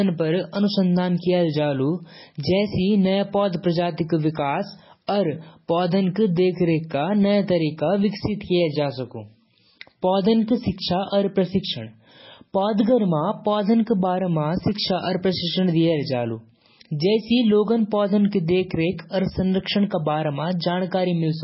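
Speech runs throughout with heavy MP3 compression artefacts, likely from a very low bitrate near 16 kbps: nothing survives above 5.6 kHz, and weak frequency lines flicker between frames, giving a watery swirl and chirpy sibilants that a plain low-pass filter would not produce.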